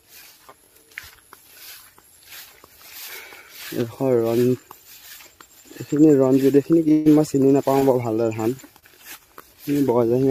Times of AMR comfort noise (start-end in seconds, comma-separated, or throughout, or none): none